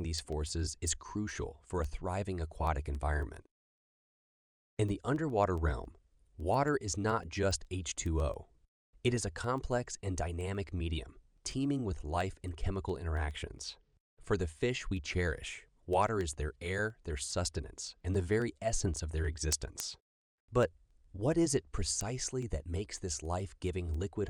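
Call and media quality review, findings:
Sharp, regular ticks through the speech, roughly every 0.15 s, from 0.19 s to 24.22 s, about 200 in all. Word clock ticks: receiving device free-running on its own clock, not locked to the digital link source. Drift near 150 ppm slips one sample per tick.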